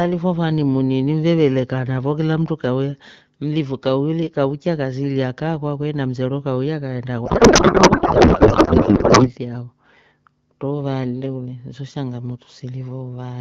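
A codec payload misread from 7.25 to 9.34 s, just after "na msero kauya kaenda", fits octet-aligned AMR parsed as bandwidth-efficient, turning the speech into garbled, warbling noise.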